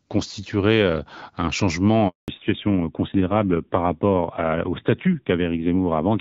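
At 2.08 s the speech cuts out in a handover gap: the call is being passed from one network to another, and no speech frames arrive while the switch completes. The sound dies away within a few tens of milliseconds and stays silent for 200 ms, until the new link comes up at 2.28 s. Whatever was spoken during that interval is simply missing, not smeared or concealed.

From 2.28 s to the end, the call shows a fallback to narrowband. Before the gap, the HD Voice path carries audio with the light coding texture typical of AMR-WB at around 12.65 kbit/s. After it, everything above 4 kHz is gone. The speech turns duller and somewhat rougher, with sibilants and consonant detail losing their edge. The rate suggests the AMR-NB codec at 7.4 kbit/s.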